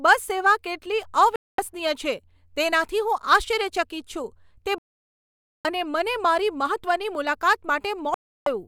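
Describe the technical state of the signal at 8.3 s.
At 8.3 s the speech is silent, inside a digital broadcast dropout running from 8.14 to 8.47 s. The receiver stopped getting decodable frames and muted its output, so about 320 ms of programme is gone, which fits a run of roughly ten lost frames, before the sound returns.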